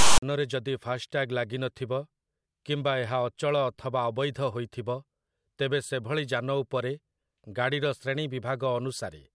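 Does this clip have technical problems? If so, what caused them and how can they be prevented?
Yes: file tags played as audio from 0.00 to 0.23 s, where text metadata read as samples gives a harsh, one-sided rasp, then zero padding goes silent. The waveform shows a hard-edged block offset from zero, then a flat line; the spectrogram shows a broadband smear. To prevent it, have the decoder skip tag blocks by their declared size before reading samples.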